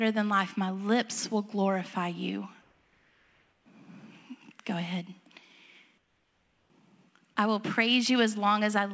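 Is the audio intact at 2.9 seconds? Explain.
No. From 2.62 to 3.66 s, just after "lips will glorify you", the real background gives way to comfort noise for about 1.04 s. The likely cause is discontinuous transmission: the sender's voice detector heard no speech and stopped sending, so the receiver synthesised roughly matched noise. It sounds like a flat, steady hiss about 3 dB quieter than the room around it. On a spectrogram the detailed texture turns into a smooth, uniform wash, topping out at 8 kHz like the rest of the call. On the waveform the noise floor becomes an even, slightly lower band.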